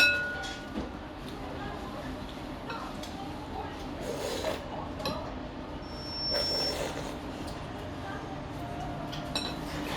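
Everyday sound, interrupted from 5.82 to 6.81 s by a piercing 5.4 kHz tone that swells over roughly half a second to sit a few decibels above the sound: loudspeaker feedback squeal, where the microphone hears its own loudspeaker and the loop gain at that frequency exceeds one.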